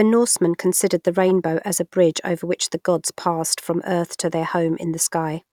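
No technical faults can be heard anywhere in the speech.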